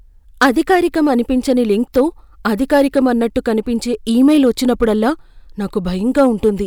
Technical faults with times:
1.50 hard clipping
1.97-2.01 hard clipping
2.73-2.99 hard clipping
4.28-5.08 hard clipping
6.18-6.49 hard clipping

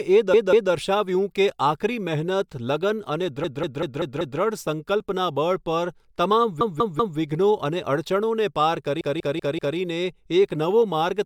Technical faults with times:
0.33-0.72 repeated frames
3.44-4.40 repeated frames
6.61-7.18 repeated frames
9.01-9.77 repeated frames

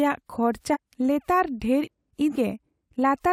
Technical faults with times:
0.72-0.77 compressed frames skipped
1.83-1.88 compressed frames skipped
2.35-2.37 compressed frames skipped

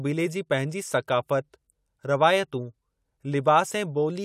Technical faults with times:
none

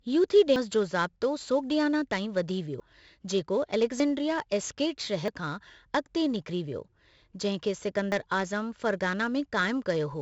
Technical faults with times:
0.00-10.21 4-bit ADPCM compression
0.56 dropped buffer (overrun)
2.80 dropped buffer (overrun)
4.00 dropped buffer (overrun)
5.28 dropped buffer (overrun)
8.12 dropped buffer (overrun)

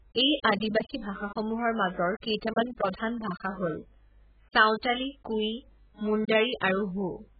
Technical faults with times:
0.00-7.39 AAC compression

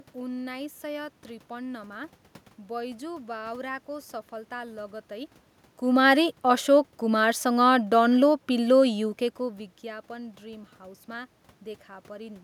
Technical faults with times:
none

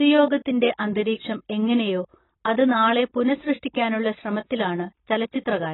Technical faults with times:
0.00-5.73 AAC compression

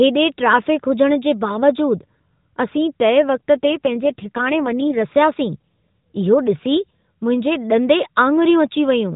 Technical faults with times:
3.56-5.01 AMR rate drop

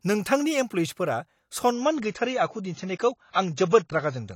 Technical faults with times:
1.72-4.35 adaptive stream at a lower bitrate

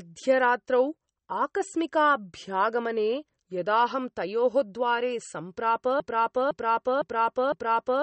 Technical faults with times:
0.00-8.02 MP3 compression
6.00-8.02 broken-record loop

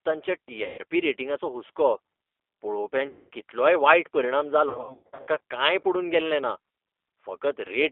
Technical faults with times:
0.00-7.91 G.729 codec
0.64-0.79 VoIP packet loss concealed by the speech codec
3.09-3.29 VoIP packet loss concealed by the speech codec
4.69-5.39 VoIP packet loss concealed by the speech codec

